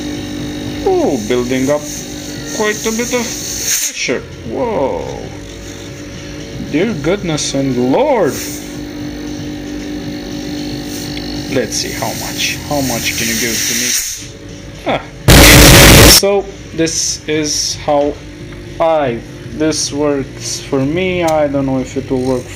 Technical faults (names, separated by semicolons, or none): signed and unsigned mixed up